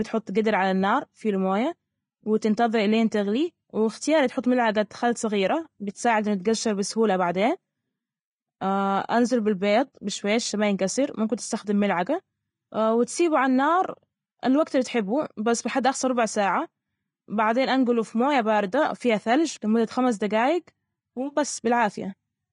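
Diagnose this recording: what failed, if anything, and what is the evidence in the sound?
The codec stage is at fault throughout the speech: the sound is hissy and grainy from start to finish, and nothing is present above 10.6 kHz. The most likely cause is Vorbis compression at a low bitrate, around 30 kbps. The encoder lowered its cut-off and quantised the treble so coarsely that fine detail was replaced by noise of similar energy. A plain low-pass filter would sound dull but clean, not gritty, and that grit is what sets this apart.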